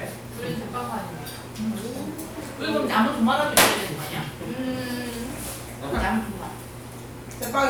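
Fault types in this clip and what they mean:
No faults are detectable in this recording of sounds.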